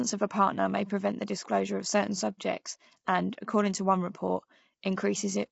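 Throughout the speech, the voice sounds rough and grainy. This is low-delay AAC compression, likely AAC-ELD with short frames that blur pitch harmonics at what sounds like about 24 kbps. A spectrogram shows smeared harmonics, noise filling the gaps between them, and nothing above 7.8 kHz.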